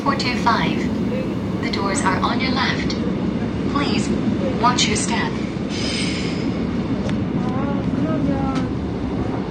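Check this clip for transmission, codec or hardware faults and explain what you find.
One fault is present: a drop to a lower-bitrate stream.

Adaptive stream at a lower bitrate, from 2.29 s to the end. Partway through, the player switched to a cheaper encoding of the same audio, probably because the connection slowed. The sound is consistent with a move from about 96 kbit/s to 32 kbit/s AAC. At that rate the encoder cuts everything above 9.7 kHz, so the top end abruptly dulls and turns smeared and grainy. There is no gap.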